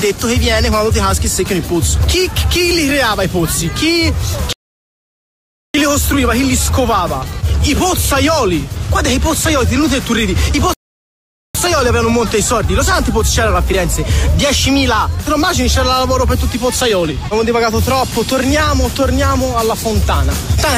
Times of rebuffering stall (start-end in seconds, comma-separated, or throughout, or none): 4.53-5.74, 10.74-11.55